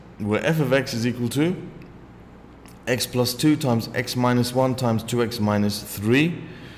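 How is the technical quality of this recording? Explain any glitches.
No audible glitches turn up anywhere in the recording, so there is nothing to diagnose.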